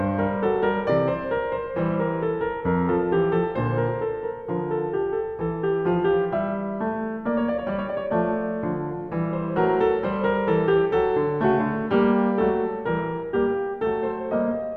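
No technical faults can be heard anywhere in this music.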